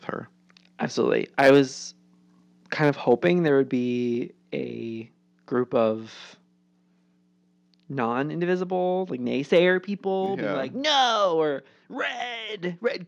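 At 1.39 to 1.59 s, 2.83 to 3.29 s and 9.56 to 9.58 s the loudest peaks turn harsh and crackly, most likely from microphone overload: the input drives the converter about 7, 2 and 1 dB past full scale, squaring off the waveform tops. Unlike codec distortion, the grit appears only on peaks. At 10.26 s the whole signal, voice and background together, drops by about 3 dB in a single instant step, a change that likely comes from the microphone volume being stepped down. It differs from a gradual fade or automatic gain control in that there is no ramp, and the new level holds steady afterwards.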